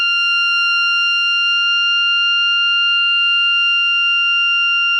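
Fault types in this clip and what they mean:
There are no fault types in this music clip.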